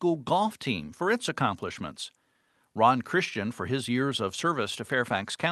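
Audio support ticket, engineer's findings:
No faults found: speech carried over the WebRTC call path with the coding texture and roughly 12 kHz top-end limit expected of Opus at a modest call bitrate, nothing further to log.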